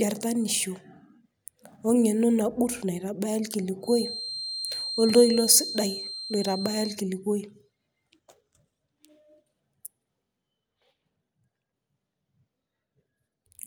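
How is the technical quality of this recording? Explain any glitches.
The speech carries one technical fault, a feedback whistle, running from 3.80 s to 7.01 s. A thin, steady tone at 4.2 kHz sits behind the speech for those three seconds, roughly 10 dB below it, swelling and fading slowly in level but never growing. The likely cause is a loudspeaker-to-microphone loop held just at its stability limit, where one frequency keeps recirculating without enough gain to build into a howl.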